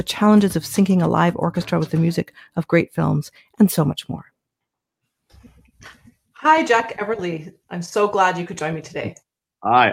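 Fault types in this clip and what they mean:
Sound cut by the noise suppressor: The noise suppressor mistook parts of the sound for background noise and pulled them down harder than the rest. It happens twice. From 2.25 to 2.57 s the level sinks by up to about 18 dB. From 3.33 to 3.59 s it drops by up to about 15 dB. In each window only around 150 ms is actually dulled, so the sound briefly thins out and then recovers.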